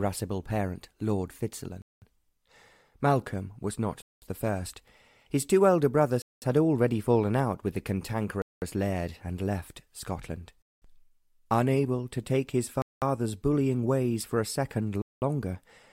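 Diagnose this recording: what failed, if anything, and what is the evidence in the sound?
Chunked transfer or playback inserted silence at every join: 200 ms gaps between chunks recur every 2.2 seconds, at 1.82, 4.02, 6.22, 8.42, 10.62, 12.82 and 15.02 s.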